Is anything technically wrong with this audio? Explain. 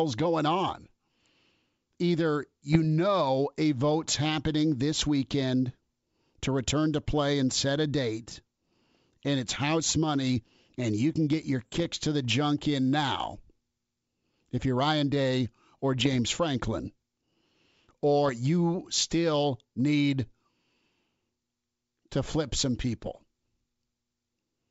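Yes. This speech has bit errors on an ADPCM link, on what sounds like a 64 kbit/s G.722 wideband path. At a rate of a few bits in a thousand, the flipped bits knock the decoder's step size and predictor off track, so each error rings on briefly. The result is pops and rough bursts with brief level jumps at 2.73–2.77 s, 11.65–11.86 s (between "you can get your" and "to the junk in"), 15.95–16.17 s, 18.26–18.31 s (just before "you still need") and 22.93–23.18 s (right after "to flip some").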